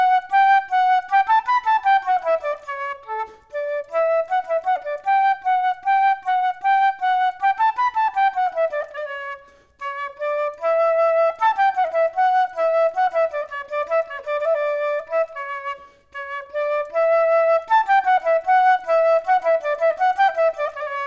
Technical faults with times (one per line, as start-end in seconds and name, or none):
none